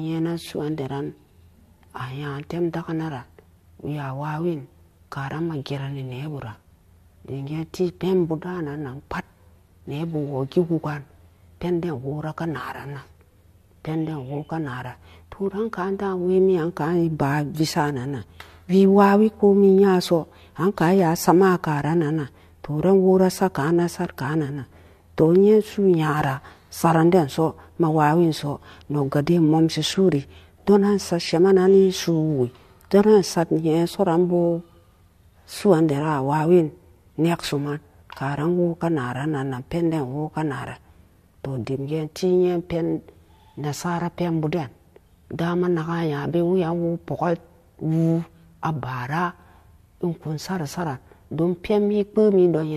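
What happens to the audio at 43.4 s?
Nothing goes wrong at 43.4 s; the speech carries straight through that moment with no dropout, click, distortion or other audible fault.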